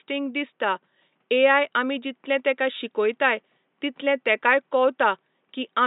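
Nothing in this speech recording stood out as a fault on listening, and the faint room noise sits about 50 dB below the speech.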